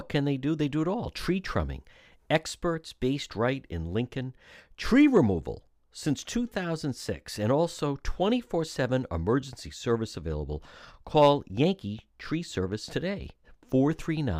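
No technical faults can be heard anywhere in the speech. Nothing in the audio stands out as a problem at any point.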